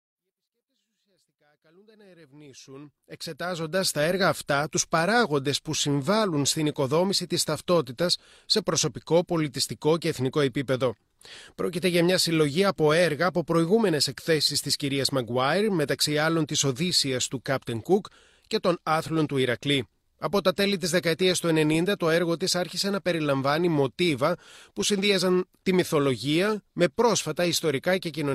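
Nothing stood out on listening to this speech recording, which simply fades in smoothly over its first 4 seconds.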